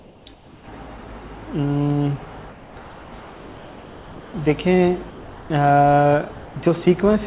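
In the pauses at 0.00–0.26 s, 0.34–0.68 s, 2.52–2.76 s, 2.84–3.12 s and 3.20–4.34 s, the quiet background turns into a flat, textureless hiss, about 1 to 4 dB lower than the real background. That background sits only about 22 to 30 dB below the loudest parts. This is likely comfort noise in place of the background: the sender stopped transmitting during silence, and the receiver filled the gap with synthetic noise. The narrow band, with nothing above 4 kHz, points to a G.711 mu-law call path.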